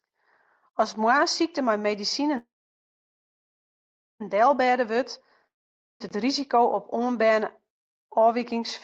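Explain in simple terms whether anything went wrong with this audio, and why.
Two things went wrong in this speech, which came through a call connection. First, a call audio freeze at 2.37 s, right after "moarnssykte mei". The sound stretches into a short fading buzz, then goes silent until 4.22 s. Nothing is lost. The speech just resumes late. Delayed packets likely left the playback buffer empty.

Second, a long network dropout from 5.47 to 6.02 s, just before "it risiko op oanberne". A brief fading buzz turns to silence. This time about half a second of speech never arrives. It was likely dropped somewhere on the network.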